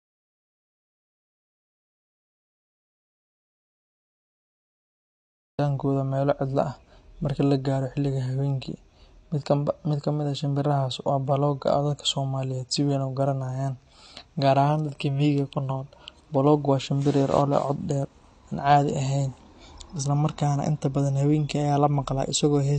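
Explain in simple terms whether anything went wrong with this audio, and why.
From the very start until 5.59 s the clip is dead silent, with an audio dropout to silence already under way, and the speech only comes in at "meelo cidlo ah marka". Unlike a natural pause, there is no room hiss at all, which points to a lost input.

Throughout, the speech shows AAC compression damage that is plainly audible, likely from a low-quality AAC encode. Nothing is heard above 10 kHz, so it sounds dull. Unlike simple muffling, the sound is also smeared, because the encoder discarded detail it judged unimportant.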